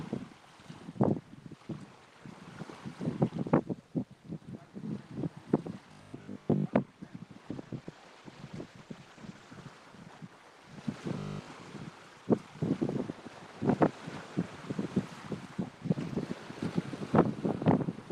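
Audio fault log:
5.92–6.66 s, robotic sound from repeated short buffers: the sound turns into a stiff metallic buzz pinned at 50 Hz for most of this stretch. It's likely a starved playout buffer looping 20 ms chunks and skipping the real audio in between.
7.49–10.02 s, call bitrate drop: the encoder's rate falls from 32 to 18 kbps and sits at the bottom for about 1.97 s. With far fewer bits the coding gets coarse, so things sound rougher and duller until the rate climbs back.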